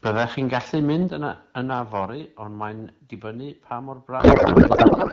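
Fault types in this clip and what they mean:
Microphone overload: From 0.05 to 1.03 s the loudest speech peaks are sheared flat, likely because the input was driven about 9 dB past the converter's limit. Around one sample in twenty is clipped, giving a harsh crackle. The waveform shows squared-off tops, and the spectrogram shows broadband splatter on those peaks.
Microphone volume stepped down: At 1.08 s, right after the distorted stretch, speech and background drop together by about 6 dB in a single step. This likely comes from automatic gain control cutting the input. The waveform envelope shrinks abruptly, and the whole spectrogram dims at once.
Codec payload misread: From 4.19 s to the end, the speech turns into garbled warbling noise that barely tracks it. This fits octet-aligned AMR frames being unpacked as bandwidth-efficient, which puts the decoded fields in the wrong places. The spectrogram loses harmonic striations and shows smeared, blotchy energy.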